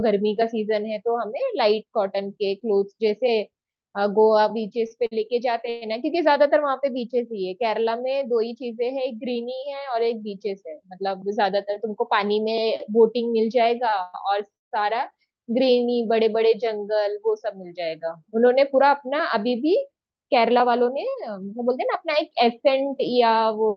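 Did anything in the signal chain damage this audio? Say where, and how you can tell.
Yes. The damage is in the network and jitter buffer stage of a call path. There are repeated stalls (stutter) from 4.87 to 5.83 s and from 13.90 to 14.73 s. Each burst has three gaps where the last sound is stretched. The gaps are up to 120 ms and 157 ms long. Packets arrived late, the buffer ran dry, and the receiver padded the holes. Nothing is missing, but the speech drags.

The same buffer also shows jitter buffer speed-up. Speech hurries at unchanged pitch from 11.01 to 12.40 s (107%), from 17.05 to 17.47 s (110%), and from 20.48 to 22.67 s (105%). The buffer had overfilled. It trimmed whole pitch periods to catch up, removing roughly 100, 50 and 150 ms in the three spans.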